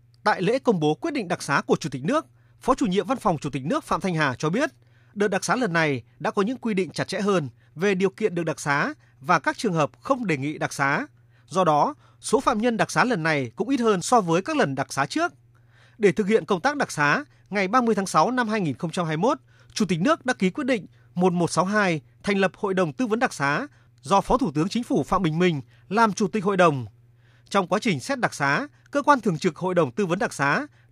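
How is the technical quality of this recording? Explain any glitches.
No glitches or faults audible.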